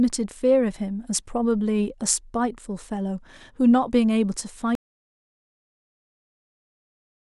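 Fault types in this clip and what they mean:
Audio dropout to silence: at 4.75 s the speech cuts off mid-flow and the rest of the clip, about 2.5 s, is silent with no room tone. This likely reflects the input being lost, such as a disconnected device or failed link, while recording continued writing silence.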